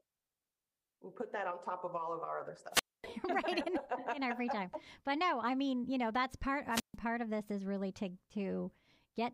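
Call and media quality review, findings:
Speech cuts to a brief static burst, then near-silent holes at 2.71–3.06 s (about 250 ms mute) and 6.70–6.96 s (about 140 ms mute). This is a wireless microphone squelch dropout: the RF signal fades, so the receiver's squelch mutes the output.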